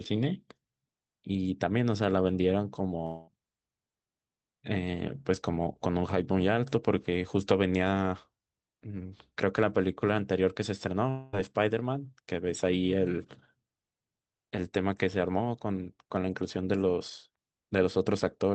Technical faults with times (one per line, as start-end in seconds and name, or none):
3.05-3.29 long network dropout
11.09-11.35 long network dropout